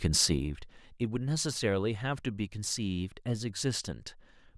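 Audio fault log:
0.32 to 0.78 s, zipper noise: a fast ticking rides on the speech while the level falls by roughly 10 dB. The gain is moved in discrete jumps, around fifty of them a second, rather than along a smoothed ramp, so every jump puts a tiny step into the waveform and clicks. Strung together, those clicks form the zipping texture that lasts exactly as long as the fade and stops once the level settles.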